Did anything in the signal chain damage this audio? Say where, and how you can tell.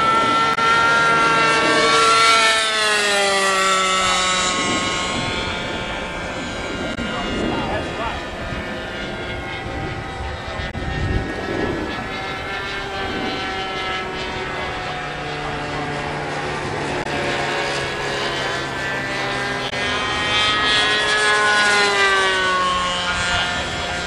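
Yes: damaged data in the compressed stream at the codec stage. There are 44 ms glitches at 0.54, 6.94, 10.70, 17.02 and 19.69 s, where the decoder loses frame sync.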